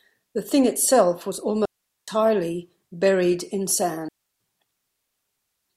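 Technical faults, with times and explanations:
1.65–2.08 s and 4.09–4.40 s, digital wireless dropout: the speech drops into clean near-silence for about 420 ms, then about 320 ms, with no noise burst either side. The receiver lost too much data from the radio link and muted with a very short fade.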